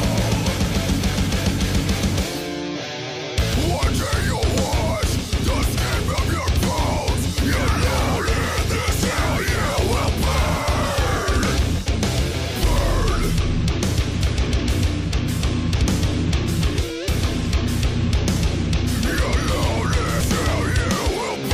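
Damaged data in a compressed stream hits the clip twice: the decoder meets corrupted frames, loses sync and hunts for the next valid header. Each event is heard as a brief chirp or blip in the sound, once at 14.2 s and again from 20.19 to 20.21 s.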